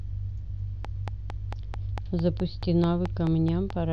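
A train of clicks runs from 0.85 s to the end of the speech, a steady series of sharp pulses at about 4.5 per second and evenly spaced, around fifteen in all. Each click has much the same shape and peaks at roughly 10 dB above the speech, so the ticking sits clearly on top of the speech and carries on through the pauses. The cause is likely interference from nearby equipment or a faulty connection or power supply injecting pulses into the signal.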